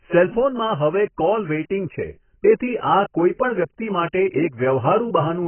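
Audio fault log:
Throughout: AAC compression. The speech has nothing above 3.1 kHz and sounds dull and muffled, with a watery, warbling smear on sustained sounds and a fizzy, hollow edge on sibilants. The likely cause is AAC-LC coding at a very low rate, which fits roughly 12 kbps. With so few bits, the encoder lowers its cut-off and quantises the remaining bands coarsely, leaving gaps in the spectrum that shift from frame to frame and cause the heavy warble.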